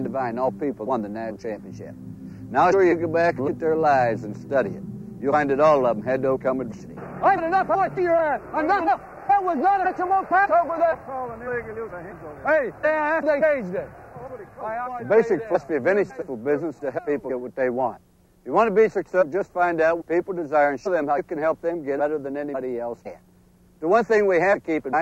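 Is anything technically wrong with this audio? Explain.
Yes. Throughout the clip, the resampler restarted on every block: the conversion from 44.1 kHz to 48 kHz was done in separate 40 ms chunks, so at each chunk edge the converter lacked the true neighbouring samples and left a small error. The result is a steady tick, or a buzz, at 25 Hz that appears only while sound is present. A spectrogram shows thin vertical lines every 40 ms, and the waveform shows tiny discontinuities at the same spacing.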